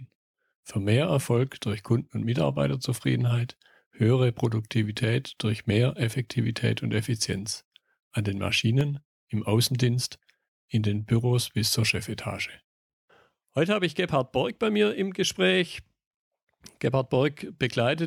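At 8.81 s, a block of digital silence: likely an output buffer that went unfilled, zeroing about 0.67 ms, which fits a 32-sample block, heard as a tick or dip.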